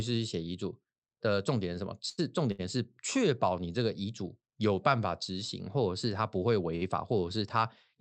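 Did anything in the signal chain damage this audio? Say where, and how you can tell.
Yes: short stalls from late packets at 2.09–2.20 s, 2.52–2.61 s and 6.76–6.84 s, in the network and jitter buffer stage. Speech holds one sound too long, by 83, 71 and 59 ms, then resumes intact: the buffer ran empty, so the receiver stretched audio until each packet arrived.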